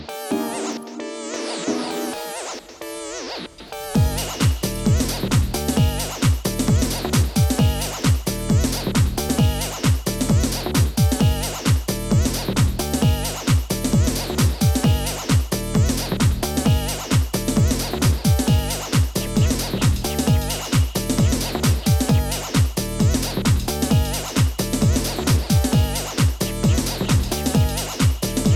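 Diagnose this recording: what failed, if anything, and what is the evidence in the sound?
The fault likely sits at the driver or buffer stage, where the recorder handles the audio in blocks of about 10 s and drops a sliver each time it closes one block and opens the next: audio missing between chunks. The sound jumps forward at 9.29 s and again at 19.27 s, each skip taking out roughly a fiftieth of a second. The two sides are butted together without any gap, and the two skips fall about 10 s apart.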